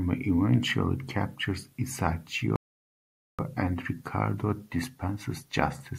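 At 2.56 s the speech drops into silence for 0.83 s, resuming at 3.39 s exactly where it left off. This is a rebuffering stall: playback exhausted its downloaded audio and paused until more data arrived. No material is lost, but the gap lengthens the clip.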